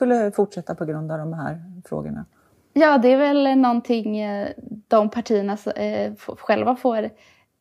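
No technical faults can be heard anywhere in this speech recording. The sound runs continuously, with no break, glitch or change in character at any point.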